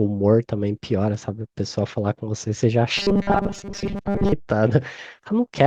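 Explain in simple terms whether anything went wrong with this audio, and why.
From 2.98 to 4.32 s the speech turns into a stiff metallic buzz locked at 200 Hz: robotic sound from repeated short buffers. Audio likely arrived too slowly, so a tiny 5 ms chunk kept replaying, filling most of that stretch.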